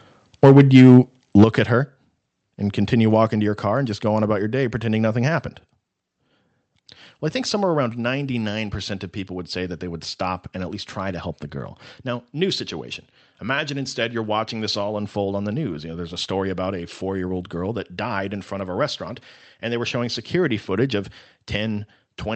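Microphone overload appears from 0.43 to 0.98 s and again from 1.37 to 1.44 s, just before "at her". The speech peaks land about 4 dB and then about 5 dB past the converter's limit, most likely because the input level was set too high. The converter flattens their tops, around 7% of samples in the first stretch and about 15% in the second, giving the loudest syllables a harsh, crackling edge.

Microphone volume stepped down at 1.44 s, right before "at her": voice and background drop together by about 8 dB in one abrupt step. This was likely the call software reacting to the clipped peak just before it by cutting the device's input gain. The level then stays lower, heard through a call path whose top end stops near 8 kHz, which fits Opus at 32 kbps.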